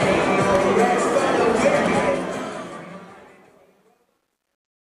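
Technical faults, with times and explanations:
1.94–4.85 s, truncation distortion on a fade: the fade-out stage drops the low-order bits without adding dither, and the grain fits a path holding only 11 bits. The level slides down smoothly from around 2 s, but as it approaches the smallest step the waveform collapses into a few coarse square steps. The tail turns gritty, and from 3.14 s to the end at 4.86 s it is at its worst.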